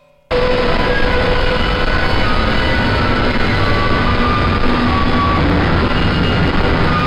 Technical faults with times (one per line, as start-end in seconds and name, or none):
1.94-2.00 frames out of order